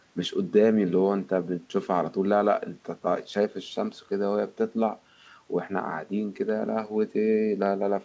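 No technical faults can be heard.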